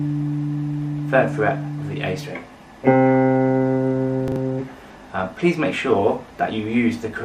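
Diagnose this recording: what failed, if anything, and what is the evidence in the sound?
At the driver or buffer stage, one block of audio was handed over late and played after the block that should have followed it: chunks out of order. Between 4.28 and 4.36 s, two 40 ms pieces play in swapped order. Nothing is missing, but the sound jumps forward, then back, then forward again, producing three hard joins and a brief jumbled stutter.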